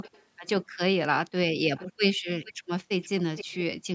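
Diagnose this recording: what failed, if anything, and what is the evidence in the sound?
Echo leak at the call-processing stage: faint delayed copies of speech at 0.02–0.24, 0.47–0.65, 1.77–1.87, 2.44–2.53 and 3.02–3.64 s, about 15 to 30 dB down and lagging 464–496 ms. That lag is too long and too discrete to be room reverb. The likely cause is a far-end canceller passing loudspeaker pickup back.

Background gated by the echo canceller: room tone dips about 40 dB at 1.88–1.99 and 2.53–2.68 s, each right after an echo burst. Unlike a network dropout, only the background vanishes while the canceller clamps the microphone.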